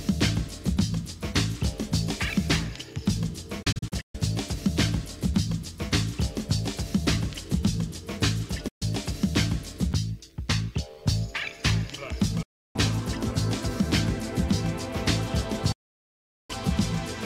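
Four digital broadcast dropouts: at 3.62 s the audio stutters through short holes over half a second, then clean mutes at 8.68 s, 12.42 s and 15.72 s, the last about 0.77 s. Each time the receiver quickly fades out on bad frames, and that audio is gone.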